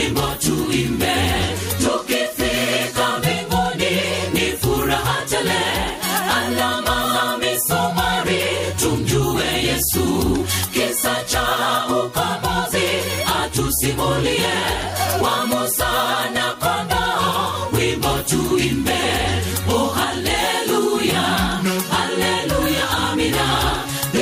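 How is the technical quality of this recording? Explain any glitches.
The recording suffers from gain pumping that runs through the whole clip. The swing is roughly 10 dB. The likely cause is input gain set far too high, with a fast limiter or compressor clamping down on every peak and releasing in the gaps. Loud and quiet passages end up squeezed to similar levels, giving a breathing, flattened quality. On a waveform, the envelope looks blocky, with little difference between peaks and pauses. On a spectrogram, the noise floor brightens in the gaps and darkens under each loud event.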